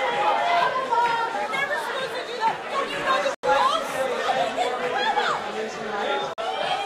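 At 3.35 s the audio drops to silence for about 87 ms, then picks up again at 3.45 s; at 6.34 s there's a shorter 44 ms gap. Both look like a likely Bluetooth stall, with the headphone buffer running dry while delayed packets were resent.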